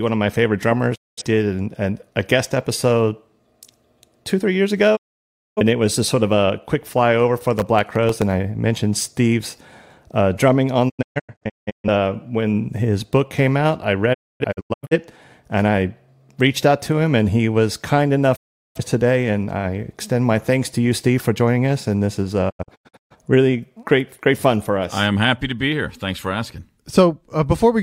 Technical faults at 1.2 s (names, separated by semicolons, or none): digital broadcast dropout